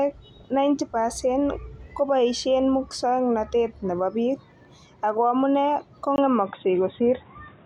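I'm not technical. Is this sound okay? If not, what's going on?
No. At 6.16 seconds the speech abruptly turns dull and boxy and stays that way to the end. Everything above about 3.8 kHz is gone, there is a tiny gap of about 20 ms at the change, and a faint new background noise appears while the loudness stays about the same. This is likely an input switched to a poorer device. The brief gap and the new background noise are what set it apart from a plain loss of treble.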